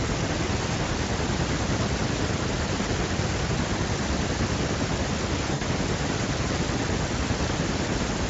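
At about 5.53 s, VoIP packet loss concealed by the speech codec takes over until about 5.64 s. Around 80 ms of audio never arrived, which fits four lost 20 ms frames, so the Speex decoder repeated its last pitch and filter at falling gain. The speech smears into a short buzzy tone or coloured noise that fades. A spectrogram shows the last spectrum frozen and thinning out, and the waveform shows a repeating cycle shrinking in amplitude before speech returns, still weak or distorted for a short while.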